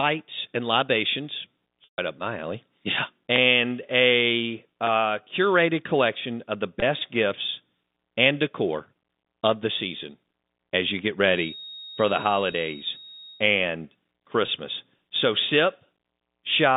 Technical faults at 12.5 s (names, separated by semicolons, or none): feedback whistle; packet loss with pitch repetition